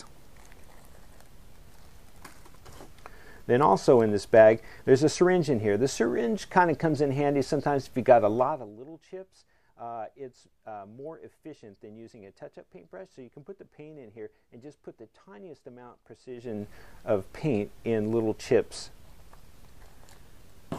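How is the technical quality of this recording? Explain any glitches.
The recording has zipper noise at two points where the level moves. From 8.32 to 8.78 s the level drops by around 20 dB, and from 16.26 to 16.68 s it comes back up by a similar amount. In both places the gain is applied in unsmoothed 1 dB jumps, roughly fifty a second, rather than as a continuous ramp. Each jump puts a tiny discontinuity in the waveform, so a fine ticking, zipping texture rides on the sound for the length of each fade.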